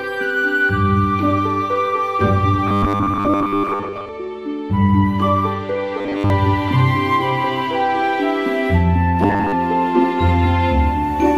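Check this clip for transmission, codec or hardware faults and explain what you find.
Three stretches of robotic sound from repeated short buffers occur, at 2.67 to 4.10 s, 5.98 to 6.30 s and 9.23 to 9.53 s. Each turns the sound into a rigid metallic buzz at 100 Hz that loosely tracks the underlying audio. The likely cause is audio arriving too slowly, so the same 10 ms buffer is replayed over and over in place of most of the real signal, and that fixed repetition period sets the buzz pitch.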